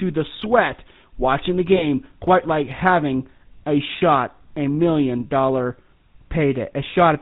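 Throughout the speech, the GSM full-rate codec at 13 kbps gives a buzzy, gravelly roughness and nothing above 4 kHz, unlike plain telephone band-limiting, which only muffles. From 1.76 to 1.85 s, between "the sweat watching the" and "quite like having a", lost GSM frames produce a brief metallic ring instead of a silent gap. This fits a single 20 ms frame being held.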